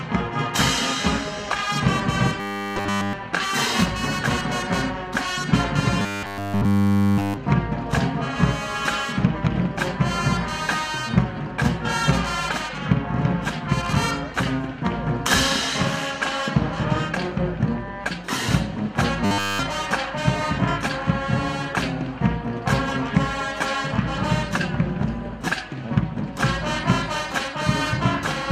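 At 2.40–3.13 s, 6.00–7.37 s and 19.25–19.59 s the audio becomes a rigid, metallic robotic sound, likely from repeated short buffers: a 10 ms slice loops throughout, imposing a 100 Hz buzz. The waveform shows identical repeating cycles, and the spectrogram shows evenly spaced 100 Hz harmonic stripes.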